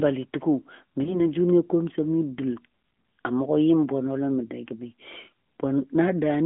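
Throughout, the AMR narrowband mobile codec confines the speech to about 200 Hz to 3.4 kHz, a sound consistent with a 10.2 kbps mode: a plainly buzzy, synthetic tone, with an empty spectrogram above 4 kHz. From 1.04 to 1.25 s, a lost AMR speech frame, a single 20 ms frame, is concealed by repeating the last pitch and tract settings at falling gain. It is heard as a brief warbling dip, seen as a waveform envelope dip and smeared harmonics.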